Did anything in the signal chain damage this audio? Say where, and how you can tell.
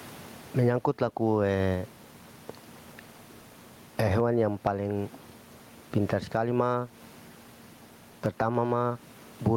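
Yes. Gain pumping throughout: the gain swings by about 15 dB, ducking under loud speech, likely excessive mic gain driving a fast call-processing limiter.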